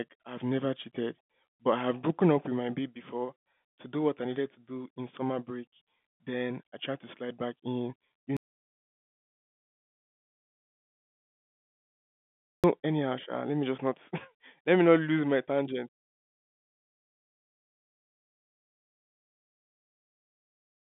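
It's a speech recording on a telephone line, so everything sits in the narrow band with nothing above about 3.8 kHz, as you'd expect from G.711 coding. The real problem is an audio dropout to silence from 8.37 s to 12.64 s. Right after "slide back in you" the sound cuts to silence, with no room tone at all, for about 4.3 seconds, then comes back in mid-flow at "anyhow sha let me". That's likely the input getting lost while the recorder kept writing silence, and whatever was said in that gap is gone.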